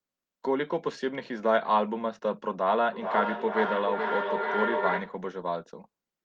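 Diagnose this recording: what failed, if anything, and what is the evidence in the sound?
Call processing broke down as feedback echo between two devices from 2.93 to 5.31 s, with the speech returning roughly every 400 ms at about 3 dB below the original, since each canceller only removes what its own device plays.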